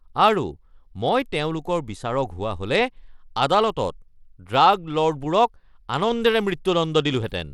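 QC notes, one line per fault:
throughout, Bluetooth SBC compression: the speech carries a plainly audible gritty, grainy coating, and the top end sounds unstable, which points to the likely cause of SBC coding at a low bit pool, around 96 kbps. Coarse quantisation across the codec's few wide sub-bands adds noise and aliasing. On a spectrogram the upper bands show blotchy, flickering patches and a rough noise floor between harmonics, though energy still reaches about 21 kHz; the waveform itself looks unremarkable.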